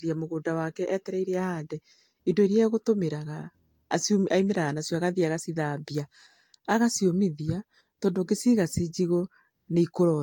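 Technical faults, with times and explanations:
Throughout: generation loss. The speech sounds swirly, smeared and hollow, with softened consonant attacks and no content above 18.7 kHz. This likely comes from about four successive lossy encodes, each near 70 kbit/s Vorbis, with fresh quantisation noise and spectral gaps accumulating on every pass.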